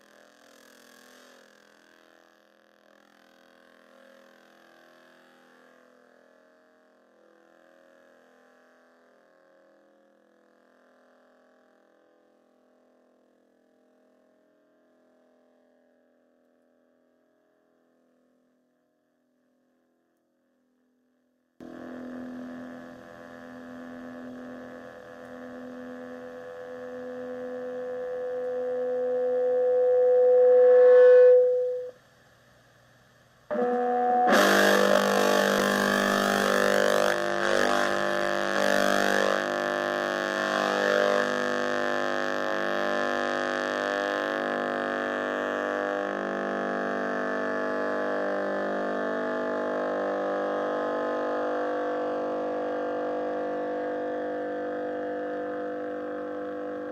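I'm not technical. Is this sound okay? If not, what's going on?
No. From the start to about 21.6 s, the sound nearly disappears and what remains is faint. The likely cause is one channel inverted: one side of the stereo pair is flipped upside down, so when the two sides are combined into one, as a phone or single speaker does, they cancel each other out. Only the small differences between left and right survive.

From about 35.6 s to 39.6 s there is a call bitrate drop. The connection's estimate of available capacity fell, so the sound was squeezed into far less data and coded more coarsely. For about 2.7 s it is at its worst and sounds rough and less detailed. Quality returns once the data rate recovers.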